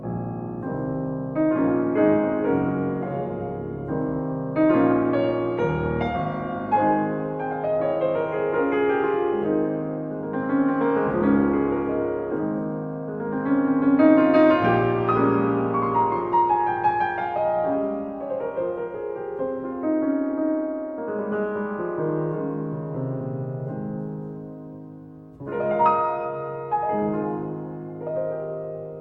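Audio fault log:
No faults heard anywhere in the recording.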